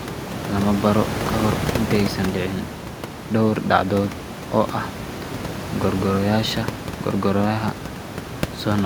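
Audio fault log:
No fault is present in the signal; the speech sits about 9 dB above the room noise throughout, with nothing in the chain disturbing it.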